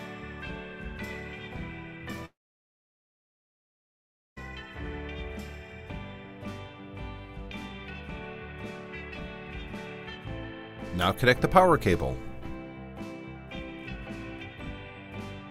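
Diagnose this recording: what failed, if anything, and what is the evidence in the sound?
Network stage: a long network dropout. At 2.25 s the sound turns into a fading buzz, then near silence until 4.38 s. About 2.1 s of audio is gone. The receiver likely stretched the last sound to cover missing data, gave up, then resumed further on.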